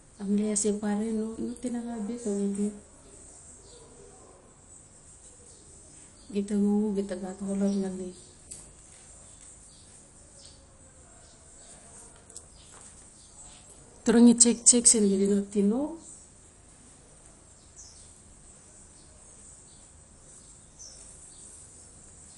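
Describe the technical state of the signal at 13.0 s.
At 13.0 s the speech carries the same damage heard across the whole clip, most likely MP2 compression at a low bitrate, which would fit something near 48 kbps. Starved of bits, the coder shuts off its upper sub-bands and quantises the rest coarsely, so the sound is dull with a plainly audible gurgling, granular roughness. A spectrogram shows a hard ceiling with nothing above 11.2 kHz and blocky, patchy energy in the bands below it.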